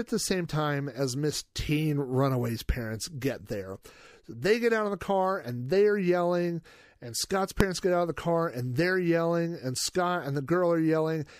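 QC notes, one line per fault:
7.60 s, invalid numbers at full scale: a failed calculation pinned the output at one extreme for 1.45 ms, heard as a single bang before "get out of the".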